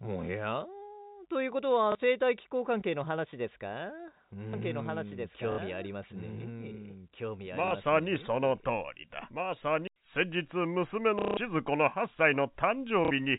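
At 1.92 s a 30 ms gap is filled by repeating the last packet, a packet loss concealment that fits 30 ms packets. The repeats recur at 5.52 s (60 ms), 7.68 s (30 ms), 11.19 s (the longest, 180 ms) and 13.05 s (60 ms). The single repeats sound like a small blip, while the multi-packet runs sound like a brief robotic stutter, buzzing near 33 Hz. On the waveform, identical blocks sit side by side with step discontinuities between them.

From 4.53 s to 9.87 s a doubled audio track runs underneath: a full-band copy about 5 dB quieter and roughly 2 s late, dry and without room colour. It likely comes from a second, slower capture path. It switches on and off abruptly, and the spectrogram shows the same patterns shifted about 2 s.

The G.711 telephone band limit at 4 kHz stays visible throughout.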